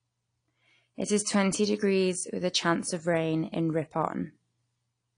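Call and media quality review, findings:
AAC compression, throughout the clip. Speech dull and smeared, no content above 10.1 kHz, plainly audible warbling and fizz on sibilants. Likely a low-bitrate AAC-LC encode, consistent with about 32 kbps: reduced bandwidth, coarse quantisation of spectral lines.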